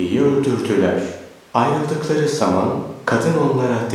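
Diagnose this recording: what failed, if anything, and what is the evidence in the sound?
Nothing in the signal chain has failed here: the speech arrives intact and continuous at a steady level, with no audible break, distortion or disturbance at any stage from capture to playback.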